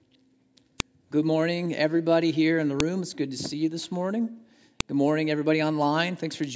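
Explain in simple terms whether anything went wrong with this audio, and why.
Three sharp clicks, at 0.80 s, 2.80 s and 4.80 s, come from a file header played as audio. The speech was delivered as separate pieces, one every 2 seconds, and each piece still carried its file header. That header is bookkeeping data, not sound, but it was played through the speaker anyway. The result is a brief snap at the start of each piece, regardless of what the speech is doing at that moment.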